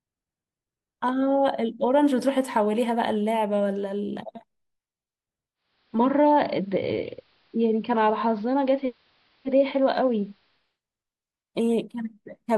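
At 5.54 s the speech shows digital radio blending to analogue. The receiver lost its digital signal and cross-faded, over 474 ms, to the station's AM broadcast. The treble drops away. A faint hiss rises, well below the speech. The level shifts by about 1 dB. At 10.81 s the receiver blends back to digital, and the full bandwidth returns.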